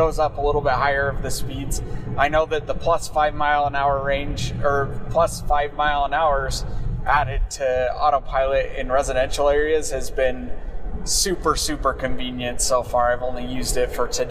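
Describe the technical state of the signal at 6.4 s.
At 6.4 s the signal is intact, with no audible fault at that moment.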